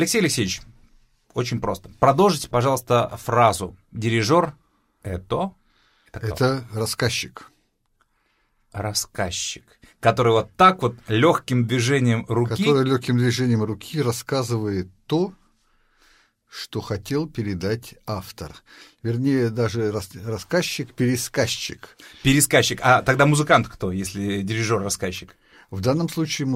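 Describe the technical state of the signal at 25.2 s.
At 25.2 s the speech signal is intact, with no audible dropout, clipping, distortion or other technical fault at that point.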